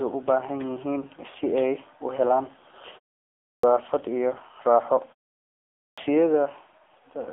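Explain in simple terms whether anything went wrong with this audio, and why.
Two things went wrong here. The whole recording went through the AMR narrowband mobile codec, the speech compression used on older phone networks, and squeezed hard. Everything above 3.6 kHz is gone, so the speech sounds thin, buzzy and a bit robotic, like a poor mobile call.

There are also two cases of clipped start after a pause. At 3.43 s, after about half a second of quiet, roughly 0.2 s is swallowed right before "iyo raaxo". At 5.79 s, after a 0.73 s pause, about 185 ms disappears. In both spots the playback device had dozed off during the silence and didn't wake fast enough.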